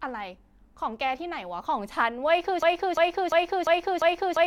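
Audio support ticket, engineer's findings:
Broken-record loop from 2.63 s to the end of the speech clip. A 0.35 s fragment repeats back to back, five times, with no new audio after it. Likely a stalled player, encoder or stream re-sending its last buffered chunk. The speech that belonged there is gone.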